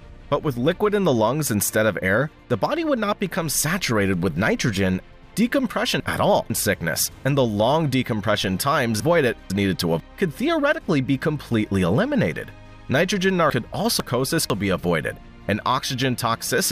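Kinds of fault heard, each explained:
Chunks out of order: Blocks of audio about half a second long are played in the wrong sequence. Between 5.0 and 6.5 s one block shows up two blocks late, and between 9.0 and 10.0 s and again between 13.5 and 14.5 s a block is one position late. Each spot sounds jumbled. Nothing is missing and nothing repeats, which is what separates this from dropouts or stutter. The same material is simply heard in a scrambled order.
DC step: At 8.42 s the waveform's zero line jumps suddenly to a new level, and you hear a single low thump while the sound itself carries on unchanged. The offset then drains away through a highpass of about 2 Hz, so there's no second thump when it returns. Because the sound around it stays intact and in order, it's a bias shift, not a splice click or a gap.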